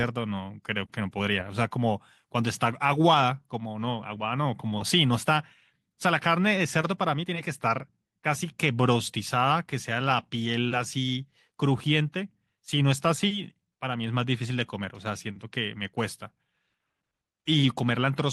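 Clock drift between sender and receiver runs through the whole clip: the sending clock is roughly five percent faster than the receiving one, so audio keeps arriving slightly quicker than it is played out and the jitter buffer steadily overfills, forcing the receiver to shed material.

Repeated timing corrections span 0.03 to 18.18 s as the receiver trims short pieces to keep pace with the 105% arrival rate. All the cuts go the same way but fall at uneven intervals, heard as faint hiccups and a slightly unsteady tempo in the speech.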